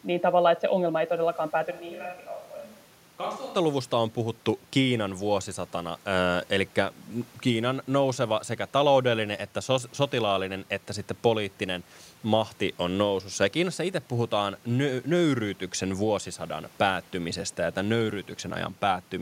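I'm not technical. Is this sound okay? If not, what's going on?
No. From 1.72 to 3.54 seconds the sound suddenly turns hollow, roomy and thin, noticeably quieter, with more background noise, then snaps back. That points to a likely switch to a distant microphone. A plain volume dip wouldn't change the tone, and the steady room noise doesn't jump like this.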